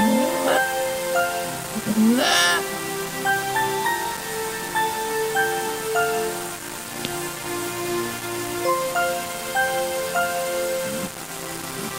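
From start to finish the sound is coated in a coarse, grainy distortion that tracks its level, with quiet passages turning gritty and sputtering, the error sitting only about 10 dB below the signal. This is likely low bit depth without dither, with values rounded to roughly 5 bits.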